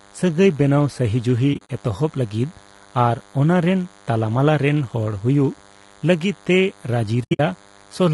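Throughout the speech runs a steady, thin DECT cordless phone buzz: a nearby handset or base pulses every 10 ms, and the audio circuitry rectifies those bursts into a 100 Hz tone with a dense harmonic series, sitting roughly 30 dB below the speech.

The speech is also rough and grainy across the whole clip, with noise filling the gaps between harmonics and an upper band that sounds thinned and synthetic. This is plainly audible coding damage, likely from low-delay AAC compression (AAC-ELD) at a bitrate around 32 kbps, where short frames resolve pitch harmonics poorly.

From 1.53 to 1.70 s, AAC frame loss with muting punches soft-edged holes in the speech. Lost frames totalling 100 ms are scattered across that 160 ms span, the longest gap about 40 ms, each faded out and back in by the overlapping windows.

The same AAC frame loss with muting recurs from 7.23 to 7.40 s and is heavier: 140 ms of muted audio spread over 160 ms, with the longest gap around 70 ms. 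That leaves a near-continuous soft dropout whose edges are smeared by the decoder's window overlap.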